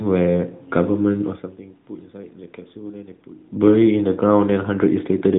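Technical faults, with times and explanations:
No technical faults are present.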